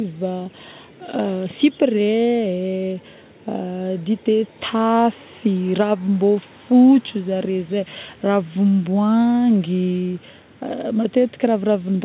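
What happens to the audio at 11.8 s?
Nothing goes wrong at 11.8 s: the speech continues intact through the call path, band-limited as expected with nothing above 4 kHz.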